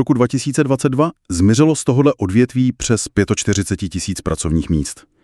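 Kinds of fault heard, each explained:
No technical faults can be heard anywhere in the audio. Nothing in it points to a problem in how the sound was captured, processed or delivered.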